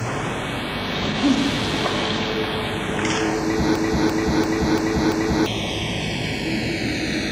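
Throughout, the channels drift apart: separate clocks, off by around 100 ppm, let inter-channel delay creep toward half a millisecond, so mono sums flange slowly. From 3.76 to 5.46 s, a system hang loop repeats one 341.33 ms slice five times at 2.93 Hz, fitting a 16384-sample buffer. The result is a stutter that loses about a second and a half of audio.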